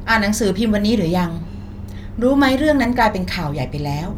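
No technical faults can be heard anywhere in this speech recording. Nothing in the signal chain draws attention to itself at any moment.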